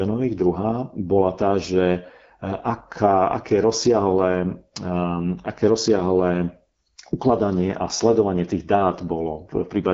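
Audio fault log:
Throughout: AMR wideband (HD Voice) codec, with plainly audible rough, raspy speech from coarse pulse-model coding, which points to one of its lowest rates, such as 8.85 kbit/s. A spectrogram shows nothing above 7.5 kHz and a smeared, noise-like band above about 6.4 kHz.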